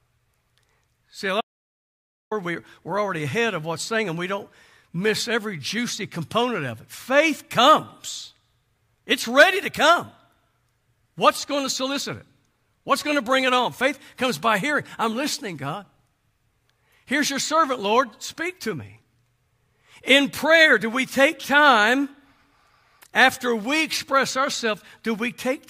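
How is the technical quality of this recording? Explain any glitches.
The recording has one clear glitch, an audio dropout to silence. From 1.41 to 2.31 s, after "a lot", the speech stops dead for about 0.9 s. There is no room tone, only silence. Then it resumes with "we're we're already ahead". The input was likely lost briefly while recording continued.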